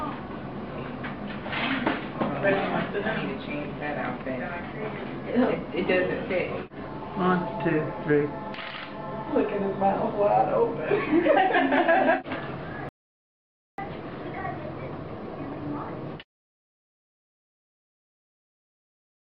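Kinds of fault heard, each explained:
Audio dropout to silence: from 12.89 s to 13.78 s the sound cuts off abruptly and the signal falls to silence for about 0.89 s, with no room tone, before resuming mid-flow. This is likely a momentary loss of input while recording continued.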